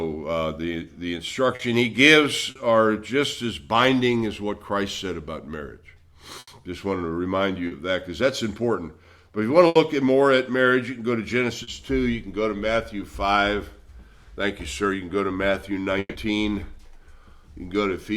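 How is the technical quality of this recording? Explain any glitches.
The recording has repeated network glitches: several brief concealed gaps, two longer bursts, and one dropout near the end.

Short concealed packet loss occurs at 1.55, 2.51, 7.67 and 11.63 s. Each time, about 40 ms of audio never arrived. The receiver extended the preceding sound to cover the hole, then blended back. Each one sounds like a quick smear or wobble.

A burst of packet loss hits at 6.39 s and again at 9.67 s. Each loses about 80 ms. The concealment stretches the last sound and fades it, so a held buzz or dimming hiss replaces the audio. Playback resumes slightly further on, skipping the missing part.

A long network dropout runs from 15.99 to 16.18 s. About 160 ms is replaced by a fading continuation of the prior sound, ending in roughly 30 ms of silence. The cause is likely a stall in delivery. The audio returns past the lost section.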